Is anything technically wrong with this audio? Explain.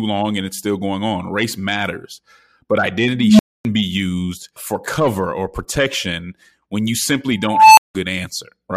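Yes. An unstable filter occurs twice: a recursive filter's output diverged, so a tone swells, clips and overflows, then cuts to silence until the filter resets. At 3.12 to 3.65 s, a low tone near 200 Hz builds over about 270 ms, then silence lasts about 260 ms before "be used for cover". At 7.44 to 7.95 s, just after "protection when you simply", a squeal near 1 kHz grows over about 340 ms, then drops out for about 170 ms.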